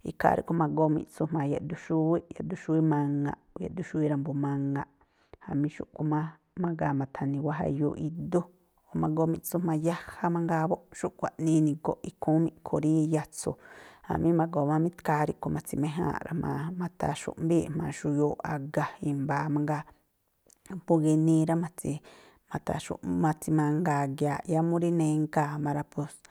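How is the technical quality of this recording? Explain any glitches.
The recording has one glitch. From 0.55 to 8.15 s, de-emphasis is applied wrongly. A treble cut meant to reverse pre-emphasis hits speech that never had it, or is applied twice. Highs slope down smoothly, about 14 dB lower at 10 kHz than at 1 kHz. The speech sounds dull and muffled.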